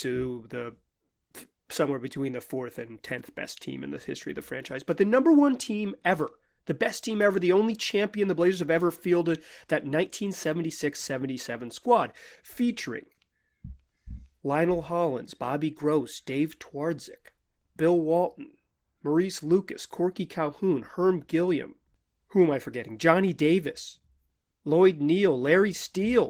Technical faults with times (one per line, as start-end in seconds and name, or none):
0.00-26.30 Opus voice compression